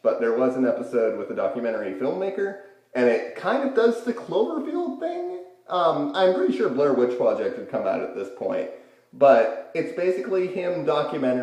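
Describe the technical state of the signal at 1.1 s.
At 1.1 s the signal is intact, with no audible fault.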